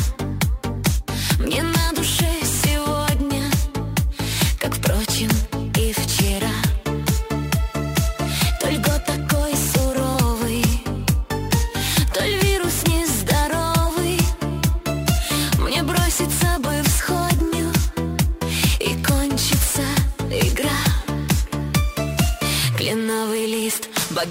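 Sample clock jitter runs throughout: a timing wobble of about ten microseconds adds hiss tracking loud, bright passages, visible as broadband fuzz hugging transients on a spectrogram.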